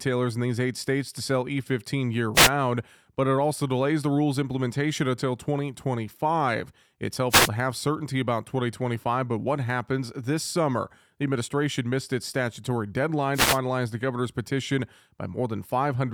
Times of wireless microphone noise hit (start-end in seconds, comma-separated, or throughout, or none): 2.34-2.50, 7.29-7.49, 13.33-13.59